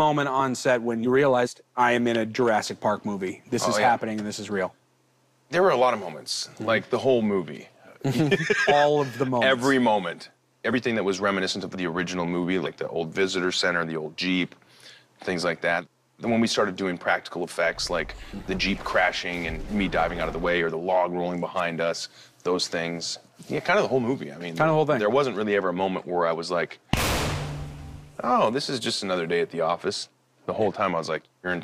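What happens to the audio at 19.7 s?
Nothing goes wrong at 19.7 s; the audio plays through that moment intact, with no dropout, click, distortion or other fault.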